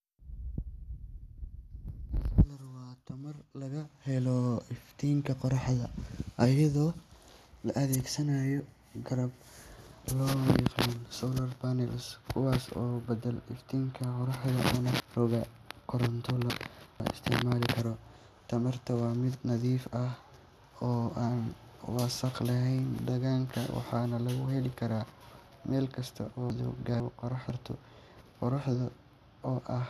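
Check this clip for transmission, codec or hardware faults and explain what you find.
Chunks out of order occur twice in this speech. At 15.0 to 17.0 s, a 500 ms chunk plays three chunks late. At 26.5 to 27.5 s, just after "meel kasta", one plays a chunk late. The jumbled sequence has hard joins, seen as abrupt vertical breaks in spectrogram and waveform.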